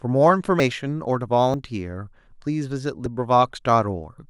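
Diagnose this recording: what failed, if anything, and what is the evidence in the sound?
Dropped buffers (overrun) at 0.6, 1.54 and 3.06 s: each is a point where the speech jumps ahead without silence, losing about 40, 70 and 20 ms. This is the driver or buffer stage, likely capture buffers overwritten before being read, splicing the remaining audio directly together.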